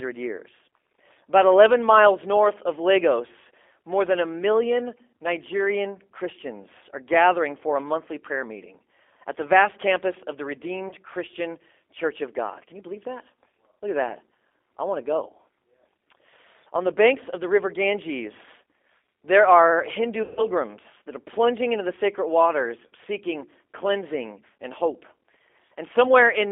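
Throughout the speech, the G.729 codec is plainly audible. The band is confined to roughly 300 Hz to 3.5 kHz. The voice has the slightly rough, synthetic grain of a coder that rebuilds each short frame from a vocal tract filter, a pitch predictor and a few pulses, which fits an 8 kbit/s G.729A stream. Plain band-limiting would only sound muffled. Here the buzzy, pulse-built texture is what identifies a model-based speech coder.

At 10.89 s, just after "vast campus of the", there is VoIP packet loss concealed by the speech codec. The sound briefly smears into a short, flattened buzz, which fits a single lost 20 ms packet. From 20.23 to 20.46 s a longer gap follows. The decoder keeps repeating its last pitch and filter while lowering the gain, so the sound stretches into a fading tone, which points to about 140 ms of lost audio. At 22.87 s, between "into the sacred waters" and "seeking cleansing and hope", a shorter stretch of the same kind occurs. 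A dropout would go silent and a jitter glitch would click. These gaps are instead filled with decaying, extrapolated sound, and the voice stays weak for a moment after packets resume.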